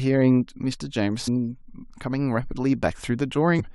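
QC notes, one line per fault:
1.27 s, damaged data in a compressed stream: a quick blip cuts into the speech, shorter than 20 ms. Part of the compressed data at this point is wrong, so the decoder misreads the frame and outputs a brief burst of nonsense before it finds a valid frame header and resyncs.
3.59–3.61 s, damaged data in a compressed stream: same thing again near the end, about 23 ms of garbage where the decoder loses sync and hunts for the next good frame.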